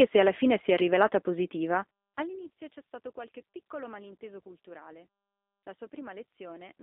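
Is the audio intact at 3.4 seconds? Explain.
No. At 3.4 s, as throughout, the G.729 codec is at work: the speech is rebuilt at 8 kbit/s from a vocal tract filter and sparse pulses, confined to a 250 Hz to 3.6 kHz line band, so it sounds plainly rough and synthetic.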